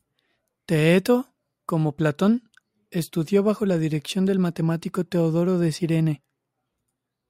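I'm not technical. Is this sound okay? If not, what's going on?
No. From about 1.91 s to the end, the speech has a crude rate conversion. The audio was converted to a different sample rate (it sounds like 44.1 kHz to 48 kHz) by estimating each new sample from the two nearest old ones, without the filtering a proper converter uses. The small errors this creates repeat in a regular pattern, adding a faint, gritty fizz that doesn't belong to the voice and is most audible on loud and high-pitched sounds.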